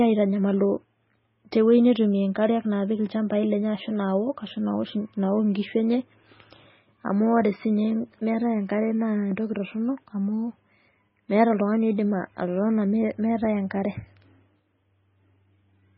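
From start to end, the speech has a hard treble ceiling near 5.6 kHz and a heavy watery swirl, likely MP3 compression at roughly 16 kbps; spectrograms show flickering speckled gaps below.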